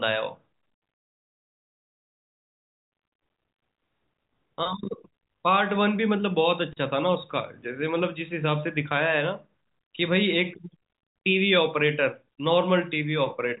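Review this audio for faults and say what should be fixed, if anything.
Nothing in this audio needs to be fixed, since no faults can be heard in it.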